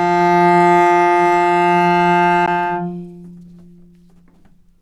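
At 2.46 s, a CD skip: the laser jumps to another turn of the spiral, muting for a split second with a tick before the sound resumes elsewhere.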